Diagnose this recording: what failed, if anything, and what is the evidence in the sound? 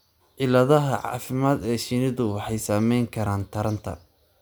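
Nothing failed in this speech recording, and the sound offers no evidence of a fault at any stage.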